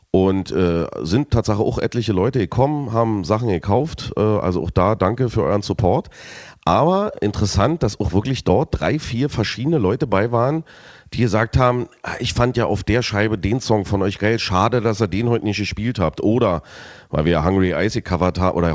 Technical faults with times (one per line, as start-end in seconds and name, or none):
none